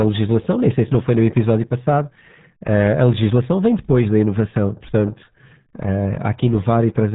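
Speech run through the RealAudio 14.4 codec throughout, at what sounds like 8 kbit/s, loses everything above 3.8 kHz and comes out heavily muffled and gargly.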